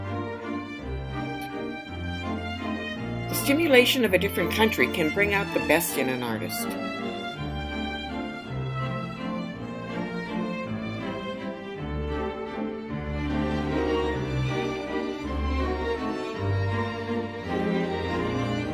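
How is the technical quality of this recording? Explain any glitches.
No glitches turn up anywhere in this recording. Nothing in it stands out as a technical problem to explain.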